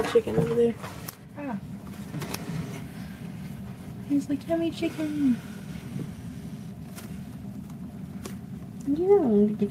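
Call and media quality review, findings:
No technical faults found: signal level and continuity stay steady throughout, with nothing audible needing follow-up.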